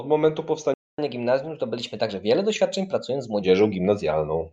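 At 0.74 s the speech cuts to silence for about 243 ms and resumes at 0.98 s. This is a playback stall, likely the player running short of buffered data or having its output thread held up. A brief dropout or lost packet differs because it skips material or leaves a click or smeared gap. Here the silence is clean and long enough to notice.

From 0.98 s to 3.42 s the speech runs at 1.1 times normal speed, and its pitch rises by roughly a semitone and a half. This is catch-up at higher speed: the player resamples its backlog faster to win back the time lost in the stall. Speed and pitch rise together for this stretch and then settle back to normal at 3.42 s. That makes it different from slow wow or drift, which wanders continuously, and from a time-stretch, which would speed up the speech without raising its pitch.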